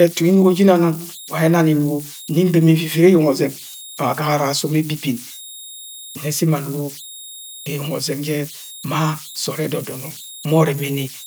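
An undithered delta-sigma converter is settling into repeating bit patterns whenever its input runs small, producing converter idle tones throughout this speech recording: an idle tone around 4 kHz sits in the pauses, with grainy noise under quiet passages, at about 20 dB below the signal.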